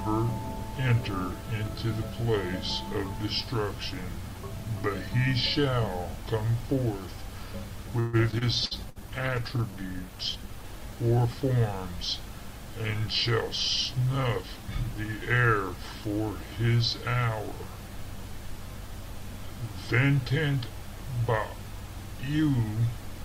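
From 7.99 to 8.98 s, repeated packet loss leaves four gaps, the longest 138 ms, patched by extending prior sound, so about 29% of the stretch comes out choppy and robotic.

At 8.31 to 8.35 s, a skip ahead drops around 70 ms of audio, joining both sides almost directly.

From 8.60 to 10.71 s, a call bitrate drop takes the encoder from 128 to 22 kbps, holding the minimum for about 1.9 s; the sound turns coarse, watery and muffled.

Overlapping, from 8.75 to 9.76 s, a jitter buffer slow-down repeats pitch periods to add 77 ms, running at 93% speed with unchanged pitch and drawn-out sounds.

From 13.93 to 15.44 s, a jitter buffer speed-up trims about a tenth of a second of pitch periods, playing at 106% speed at the same pitch and sounding hurried.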